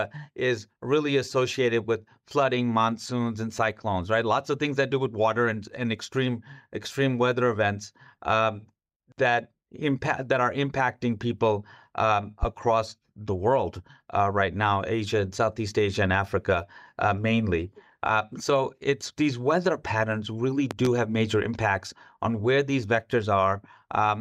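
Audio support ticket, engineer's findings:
Loud pop, 12.43–12.46 s after "are impacting people um": single sharp pop, about 10 dB over speech. Loud pop, 20.71–20.88 s between "these weather patterns really" and "have major impacts on": double pop, about 15 dB. Speech continues underneath. Likely a voltage transient from plug, switch or static, shaped by downstream circuitry.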